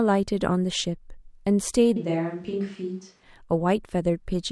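From 1.97 s to 3.23 s the speech abruptly becomes roomy and hollow, loses low-end body, and drops about 5 dB in level, with background noise rising to roughly 35 dB below the speech. At 3.23 s it snaps back just as suddenly. The pattern points to a switch to a distant microphone, likely because the close microphone's signal dropped out and a farther pickup, such as a camera mic, filled that stretch.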